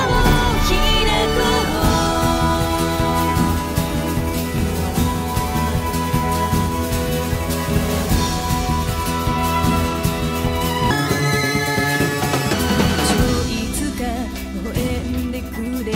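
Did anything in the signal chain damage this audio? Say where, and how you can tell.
Yes. A section at the wrong speed runs from 10.91 to 12.53 s, where the sound jumps to 1.73 times normal speed and rises about ten semitones. It is likely a playback or editing stage reading that stretch against the wrong clock, shifting tempo and pitch together.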